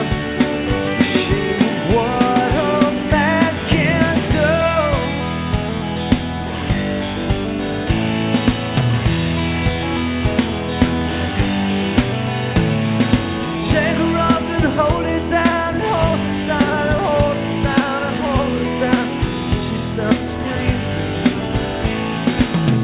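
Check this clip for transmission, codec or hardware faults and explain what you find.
No transmission, codec or hardware faults can be heard.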